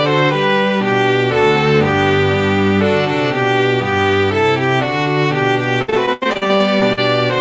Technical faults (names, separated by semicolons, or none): repeated packet loss (robotic sound)